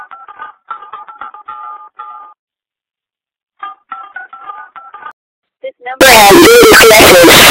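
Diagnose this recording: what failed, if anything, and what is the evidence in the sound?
The sample-format conversion likely mixed up signed and unsigned 16-bit samples from 6.01 s to the end at 7.50 s. Flipping the top bit turns every zero crossing into a full-scale jump, so the sound becomes a harsh, very loud distortion in which quiet moments are as loud as the rest.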